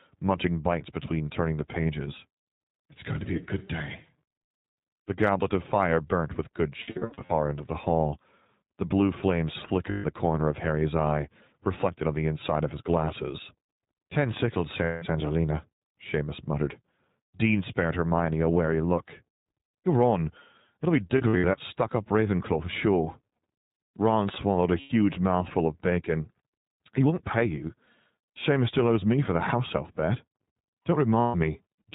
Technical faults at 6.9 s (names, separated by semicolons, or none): iLBC codec; lost iLBC frames